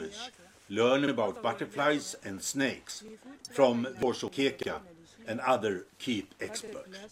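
A brief stutter at 1.08 s, where a 48 ms slice plays twice, is overlapping chunks: each 2 s processing chunk begins before the previous one ends. Small jumps ahead at 1.36 s and 2.98 s are likely a dropped buffer (overrun), with roughly 20 ms of sound overwritten before it was read and the two sides joined. The same doubled-slice stutter returns at 3.08 s. A short glitch at 4.03 s comes from damaged data in a compressed stream, where the decoder lost frame sync and resynchronised. Another skip-ahead at 4.28 s is likely the same overrun, this time losing roughly 40 ms. The chunk-overlap stutter recurs at 4.63 s and 6.68 s.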